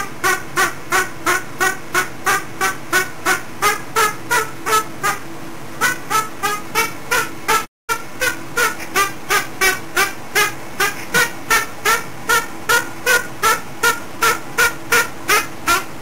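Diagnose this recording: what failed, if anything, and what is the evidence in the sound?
Periodic clock jitter at the converter: a rough, metallic edge throughout, from sidebands spaced around 400 Hz from each component, strongest on high content. Unlike hum, it vanishes in silence.

Digital broadcast dropout in reception: the sound fades out over 20 ms at 7.64 s and returns at 7.91 s. The gap fits about seven lost frames. Material is missing, not delayed as in a buffer stall.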